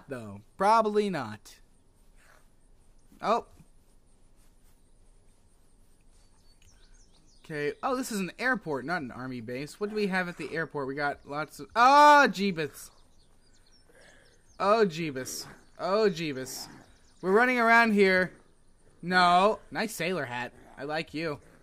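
From 17.3 s to the end, the resampler restarted on every block. Each 10 ms block was converted separately, so every block edge lacks its true neighbouring samples and carries a small error. This fits a 48 kHz to 44.1 kHz conversion and is heard as a 100 Hz buzz that tracks the signal.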